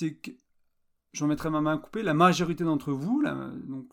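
A short speech recording with nothing technically wrong to point to.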